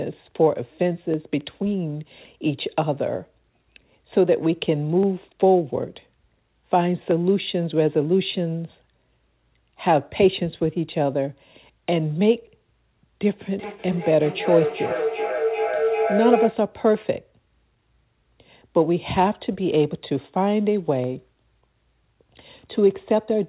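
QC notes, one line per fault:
1.14, 5.03, 7.11, 21.04 s: dropped samples. A fraction of a millisecond of audio likely went missing, so the waveform jumps and produces a single sharp click.
13.41–16.71 s: feedback howl. Two devices in one room on the call let the loop gain build into a howl around 500 Hz. The loop's round trip is roughly 0.4 s, and the howl peaks about 3 dB below the speech.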